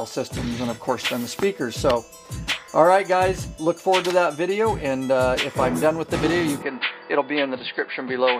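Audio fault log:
6.63 to 8.4 s, input switched to a poorer device: the sound abruptly dulls, nothing above 4.8 kHz, same level, faint new background noise; likely a narrower-band mic took over.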